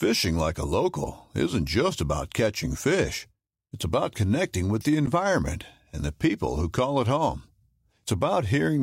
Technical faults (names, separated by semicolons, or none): corrupt frame decoded